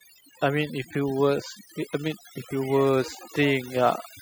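From start to finish, the speech plays over a background that drops away and breaks up into twinkling specks that come and go. This is overdone noise removal: the noise reduction was set too strong, shutting down individual frequency bands near its noise estimate and taking quieter speech detail with them.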